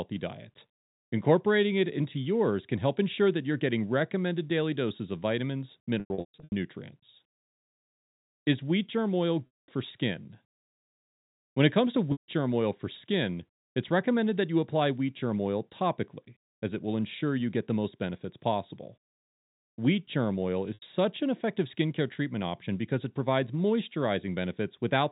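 Held, buzzy stretches that fade toward silence break the speech at 6.0–6.52 s after "daily doses of vitamins", 9.46–9.68 s, 12.12–12.28 s after "it comes to", and 20.74–20.82 s after "germ oil". This is packet loss with pitch repetition: the receiver loops the last pitch period to cover 400, 220, 160 and 80 ms of missing audio.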